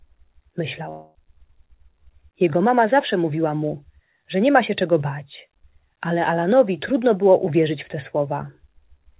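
From 0.9 to 1.16 s the sound stops progressing. A quarter second of audio is missing. In its place the last sound carries on as a fading buzz or hiss that fills nearly the whole gap, with no true silence. Then the audio resumes further on, skipping what was lost. This is a long network dropout, likely caused by packets failing to arrive and the receiver concealing the hole. The call path's G.711 coding leaves nothing above 4 kHz.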